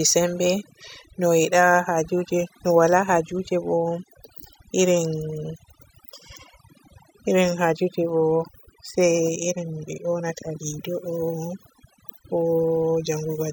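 Overdone noise removal runs through the whole clip: the denoiser pulls single frequency bands down whenever they sit near its noise estimate, leaving near-silence flecked with twinkling specks. Unlike a gate, which closes everything together, it works band by band.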